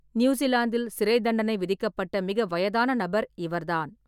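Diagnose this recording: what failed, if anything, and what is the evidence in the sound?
Nothing in the chain appears to have failed: the speech signal arrives continuous and intact, with steady level and timing and no audible disturbance attributable to any stage from capture through playback.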